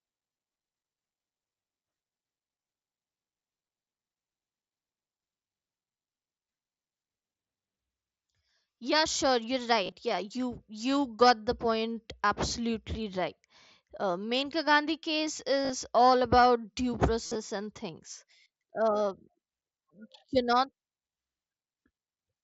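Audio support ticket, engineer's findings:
Brief buzzy, held-level tone with a small warble on recovery at 0.33 s, 9.84–9.94 s after "sure you're", 15.62–15.70 s before "all about due", and 17.26–17.35 s between "all about due" and "and things". Concealed Bluetooth headset packet loss: dropped headset voice packets, gaps bridged by repeating recent waveform. Later bursts lose about 70 ms each in short scattered runs, longest 52.5 ms at 17.3 s. Link uses the mSBC headset codec, with light graininess audible.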